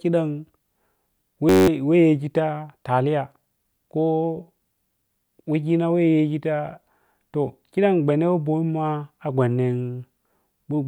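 A system hang loop runs from 1.49 to 1.68 s in this speech clip. The machine or its audio driver stalled while the sound hardware kept replaying the same tiny stretch of its ring buffer. Each loop lasts 10.67 ms, which fits a 512-sample buffer. Repeated back to back, it becomes a steady buzz at about 93.8 Hz in place of the speech, and roughly a fifth of a second of the original audio is lost.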